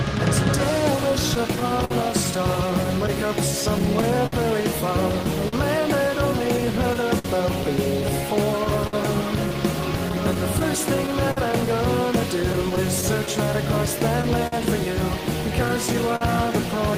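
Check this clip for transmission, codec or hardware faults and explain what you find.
Two transmission faults are audible.

Clock drift between sender and receiver runs throughout: the sender's clock is roughly 4% slow, so the receiver's buffer keeps draining, producing recurring small stretches, repeats and timing hiccups at uneven intervals.

Scattered short gaps occur from 1.11 s to 16.23 s: around thirty lost or late packets, the longest about 50 ms, each patched by extending the preceding sound, leaving brief ticks and smears.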